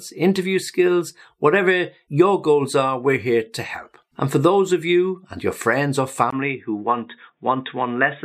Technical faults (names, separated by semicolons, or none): input switched to a poorer device